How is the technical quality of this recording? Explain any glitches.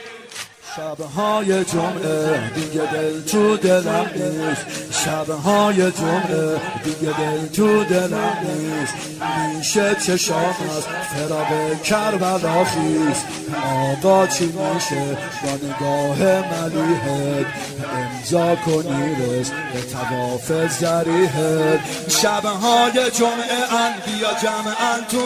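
No technical glitches can be heard anywhere in the recording. There is nothing here that calls for an explanation.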